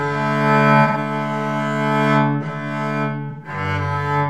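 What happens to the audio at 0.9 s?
From 0.87 to 0.97 s comes AAC frame loss with concealment. About 85 ms of data, consistent with two lost frames, was rebuilt by the decoder from the last good spectrum. It sounds briefly smeared and noisy, and a spectrogram shows a blurred block without fine detail.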